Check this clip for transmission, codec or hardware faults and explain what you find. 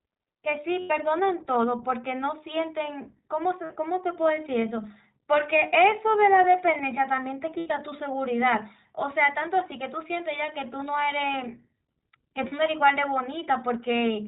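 Two faults are present: the speech has passed through the iLBC codec, and several stretches of it were lost in transit.

The iLBC codec runs through all 14 seconds. It codes each frame's excitation independently and discards everything above 4 kHz, so the speech is band-limited and plainly rough, with a slightly synthetic edge. The damage and the frame-by-frame character fit the 15.2 kbps mode with 20 ms frames.

Lost iLBC frames occur at four points. During each gap the decoder filled in by repeating the last pitch cycle mixed with noise, which sounds like a held, faintly buzzy vowel. Because iLBC frames stand alone, the voice recovers almost at once. The gaps fall at 0.80 to 0.92 s (100 ms), 3.64 to 3.72 s (60 ms), and 12.48 to 12.53 s (40 ms). At 7.50 to 7.72 s, 140 ms of loss is scattered over about 200 ms, with the longest run around 70 ms.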